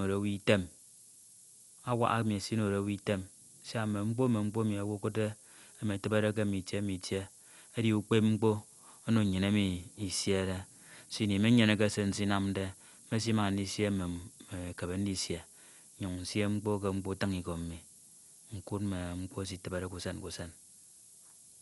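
Speech runs throughout over a steady, thin hiss from low bit depth with noise shaping, which fits 8-bit audio. The noise sits about 15 dB below the signal and climbs sharply toward the treble, unlike flat white noise. The speech is also dull, with nothing above 11.4 kHz and a rough flutter around tones, most likely from Dolby Digital compression at a low bitrate, perhaps 64 kbps. This is set apart from the hiss by the hard top cut-off and the noisy warble clinging to the speech.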